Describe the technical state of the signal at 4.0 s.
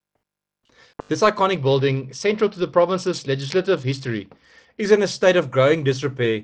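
A Bluetooth SBC bit pool drop runs from 1.57 to 4.80 s. Starved of bits, upper sub-bands vanish, dulling the treble under gritty quantisation noise, which fits roughly 72 kbps.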